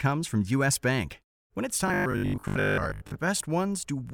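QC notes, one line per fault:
1.88–3.18 s: robotic sound from repeated short buffers. Speech becomes a rigid 50 Hz buzz, likely a 20 ms buffer replayed while most real audio is skipped.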